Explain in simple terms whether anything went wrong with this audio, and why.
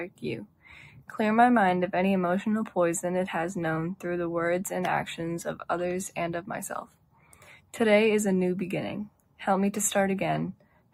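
A noise suppressor meant for speech was applied to this audio. It treats steady sound as noise and turns it down, so the level keeps pumping.

Sound was cut by the noise suppressor at 0.07–0.24, 0.41–1.09, 6.84–7.73, 9.09–9.39 and 10.54–10.93 seconds. Held and fading parts sink noticeably there.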